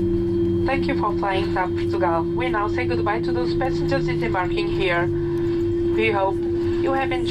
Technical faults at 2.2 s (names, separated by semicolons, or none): none